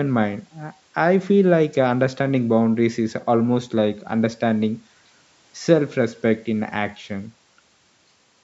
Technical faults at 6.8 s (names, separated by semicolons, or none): none